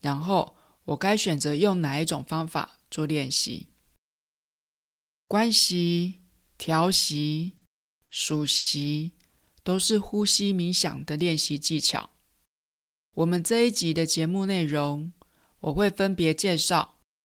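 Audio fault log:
7.57–7.64 s, 8.03–8.12 s, 8.57–8.69 s: short stall from a late packet, three times. Each time the jitter buffer ran dry, so the last sound was held for about 40, 60, then 90 ms until data arrived. Nothing is skipped, but a sound drags with a faint buzz or dip, and playback falls progressively further behind.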